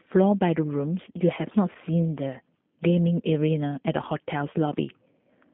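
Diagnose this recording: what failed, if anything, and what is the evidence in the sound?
Throughout the speech, the sound is narrow and slightly rough and synthetic, with nothing above about 3.5 kHz or below 150 Hz. That points to the G.729 codec at roughly 8 kbit/s, which rebuilds speech from a vocal-tract filter, pitch predictor and sparse pulses rather than the actual waveform.

Between 1.73 and 1.77 s, about 20 ms of the speech smears briefly into a stretched, fading sound before it recovers. This is VoIP packet loss concealed by the speech codec, consistent with a single lost packet on the network. The decoder extended its last pitch and filter to fill the gap.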